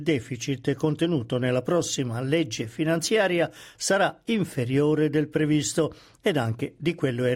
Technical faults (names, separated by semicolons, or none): none